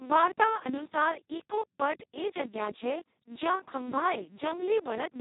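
It's a short speech recording, and the whole thing has been through the Speex codec at a very low setting. The voice comes out hoarse and buzzy, close to robotic, because the codec has almost no bits left to describe the excitation. That degree of damage points to a rate of roughly 2 kbps, right at the vocoder-like bottom end. Nothing comes through above about 3.8 kHz, so the sound is narrowband and muffled.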